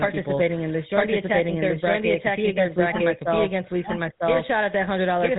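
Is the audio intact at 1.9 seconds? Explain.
No. The speech at 1.9 seconds carries two faults that run through the whole clip. The first is a doubled audio track, likely from a second, slower capture path mixing the same signal back in. A full-band copy trails about a second behind at roughly the same level, with no decay or room colour, so the voice at 1.9 s overlaps its own earlier material.

The second is the GSM full-rate codec. It models the vocal tract and excites it with sparse, regularly spaced pulses, and the damage fits a 13 kbps full-rate stream. Nothing above 3.8 kHz survives, and the voice has a plainly audible buzzy, gravelly roughness.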